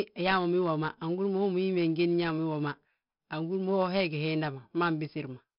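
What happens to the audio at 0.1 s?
At 0.1 s you're hearing 4-bit ADPCM compression, and it runs through the whole clip, not just that moment. Each sample is coded as a small 4-bit step from a predicted value, so the coding error rides along as gritty hiss that swells with the speech. The damage is heavy, with roughness on sharp onsets. Nothing reaches above about 5.3 kHz, which dulls the top and fits a low sample rate of around 11 kHz at roughly 44 kbps.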